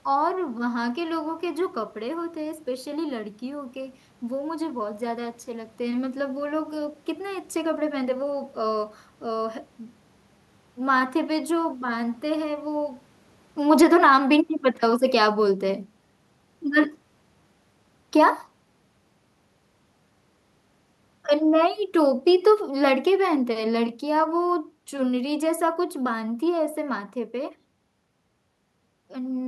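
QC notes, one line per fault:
13.56–18.43 s and 21.3–26.73 s, automatic gain falling: in each span the level sinks steadily, by about 5 dB in the first and about 7 dB in the second. The room noise drops along with the speech, which shows the whole signal was turned down by gain control that judged the input too loud or its background noise too strong. The talker's movement near 13 s changes the level only at the microphone and does not pull the background down.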